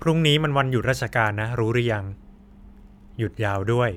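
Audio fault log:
No faults detected anywhere in the speech recording.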